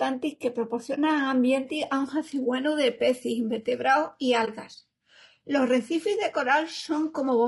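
Low-delay AAC compression runs through the whole speech clip, with plainly audible damage. The voice has a rough, grainy texture, with noise filling the gaps between pitch harmonics and a thin, somewhat synthetic top band. This is likely AAC-ELD at a low bitrate, around 32 kbps. Its short frames keep delay small for calling, but they separate closely spaced harmonics poorly and spend more bits per second, so too few bits remain to code the fine spectral detail.

AAC frame loss with muting occurs first from 0.95 to 0.98 s and again from 4.45 to 4.48 s. Each time the speech makes a brief dip, fading out and back in. The gap length fits a single lost frame of about 20 ms. The decoder replaced the missing frame's spectrum with silence, and the overlapping transform windows smeared that silence into a short fade rather than a hard cut.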